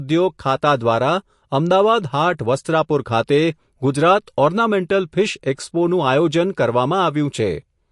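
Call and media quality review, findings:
Watery, swirly texture across the whole speech clip, nothing above 11.3 kHz. Likely MP3 compression starved for bits: encoder lops the treble at a fixed cutoff, weak frequency lines flicker frame to frame. Plainly audible, fits roughly 48 kbps.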